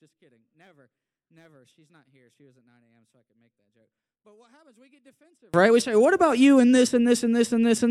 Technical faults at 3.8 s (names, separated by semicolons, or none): one channel inverted